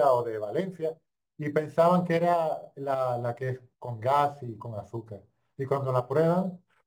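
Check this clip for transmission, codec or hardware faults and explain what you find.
One fault runs through the whole clip. Crude rate conversion, present throughout, comes from samples being dropped by nearest-neighbour picking without filtering, which fits a 48 kHz to 44.1 kHz change. The repeating error, around 30 dB below the speech, adds a gritty, inharmonic fizz that tracks louder and brighter syllables.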